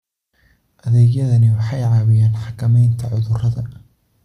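Speech recording, with no technical faults to report.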